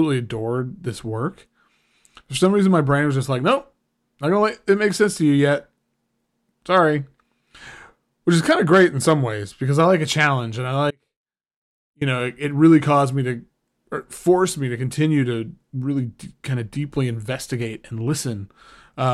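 An audio dropout to a faint residue runs from 10.91 to 12.01 s, just after "a challenge and I" and ending as "know it really caused" comes in. For about 1.1 s the speech falls away abruptly, with no fade, leaving only a faint trace of sound some 35 dB below its normal level. The likely cause is a momentary break in the signal path while the chain after it stayed live.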